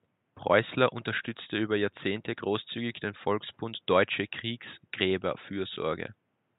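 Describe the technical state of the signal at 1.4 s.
At 1.4 s the signal is intact, with only the room's own background noise sitting about 45 dB below the speech.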